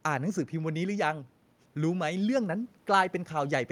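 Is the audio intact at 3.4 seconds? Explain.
Yes, at 3.4 seconds the audio is intact, with no fault heard at that moment.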